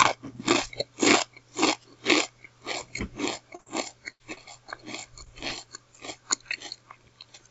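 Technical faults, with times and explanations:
2.67 s and 5.66 s, audio missing between chunks: The sound jumps forward abruptly at each point, with no silence in between. Only a few milliseconds drop out each time. The skips fall exactly 3 s apart, so the likely cause is a piece lost at each 3 s chunk boundary.
3.55–3.61 s, 4.34–4.43 s, 5.24–5.28 s, 5.48–5.53 s, short concealed packet loss: Each event leaves a brief smear or wobble. Between 20 and 40 ms of audio never arrived. The receiver covered each hole with 15 to 34 ms of continued sound, then blended back into the real signal.
3.61–3.68 s and 4.12–4.22 s, burst of packet loss: Longer holes of 60 ms and 80 ms were lost. The receiver continued the last sound for 51 ms and 78 ms, fading it as it went. The first burst follows straight on from the 3.55 s dropout.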